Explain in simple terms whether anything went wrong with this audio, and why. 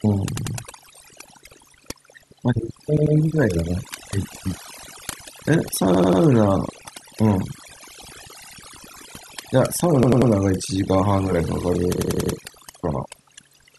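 Yes, two things went wrong. Throughout the speech, the background drops and breaks up into twinkling, warbling specks. That is overdone noise removal: a noise reduction tool set too strongly cut away quiet parts of the voice along with the noise.

At 0.37, 2.97, 5.94, 8.45, 10.03 and 11.98 s, the speech stutters as a short chunk about 93 ms long plays again, one to four extra times, with a hard join each time. That is a repeated buffer. New audio arrived late, so the device replayed its last chunk, which fits a 4096-sample buffer. Nothing seems to be missing afterwards.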